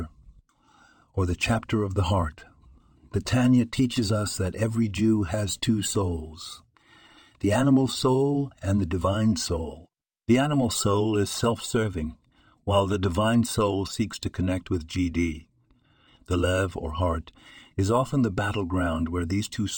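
Speech, with no faults heard.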